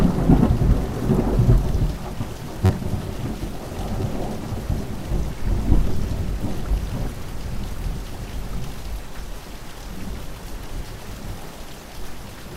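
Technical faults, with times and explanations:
2.66 to 2.70 s, repeated buffer: a 10.67 ms slice plays four extra times, giving a brief buzz with hard joins. About 40 ms of sound is lost. This fits a 512-sample buffer arriving late.
4.02 s, repeated buffer: one 10.67 ms slice plays twice, heard as a single click. About 10 ms of sound is skipped.
8.09 s, repeated buffer: one 10.67 ms slice plays twice, heard as a single click. About 10 ms of sound is skipped.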